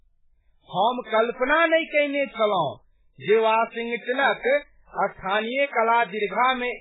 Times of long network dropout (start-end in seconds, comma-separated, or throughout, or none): none